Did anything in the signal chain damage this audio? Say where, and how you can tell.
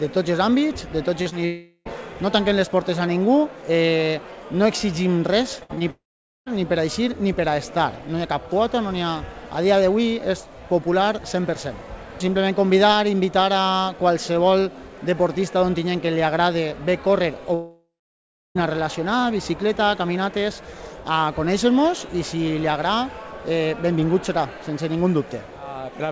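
Yes. The damage happens at the network stage. Short concealed packet loss shows up as brief smears at 1.22–1.27 s and 1.29–1.33 s, about 40 ms and 20 ms missing. In each case the receiver extended the preceding sound to cover the hole and then blended back into the real audio.

There are three gaps that sound like a long network dropout: 1.45–1.87 s, 5.90–6.48 s and 17.54–18.57 s. In each, a continued tail fades to silence, which lasts about 0.7 s in the last case. The audio then resumes with that stretch missing. These are likely extended packet outages.

Repeated packet loss (robotic sound) runs from 5.59 to 5.82 s. There are four closely spaced gaps, the longest 59 ms, and nearly half the span is concealed. The result is choppy, with pieces missing, because each patch is followed almost immediately by the next loss. Throughout the clip, the band stops at 8 kHz, which is consistent with a 64 kbps G.722 call path.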